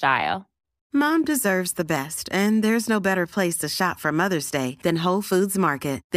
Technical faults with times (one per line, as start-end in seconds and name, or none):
none